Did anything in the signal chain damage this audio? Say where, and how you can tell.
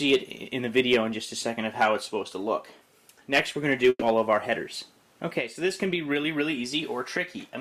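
Yes: a burst of packet loss at the network stage, 3.89 to 4.03 s. About 120 ms is filled by continuing the last sound as it fades, then roughly 30 ms of silence, and 120 ms of material is skipped. On a spectrogram, frozen smeared bands decay into a blank strip before the signal resumes.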